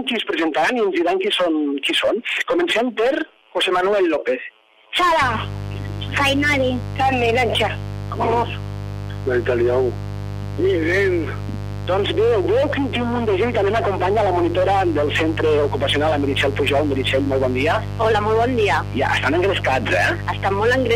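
From 5.22 s to the end, a steady, raspy buzz sits only a little below the sound itself. This is mains buzz: sharp 50 Hz switching spikes, arriving twice per cycle, leak in and spread harmonics up into the kilohertz range.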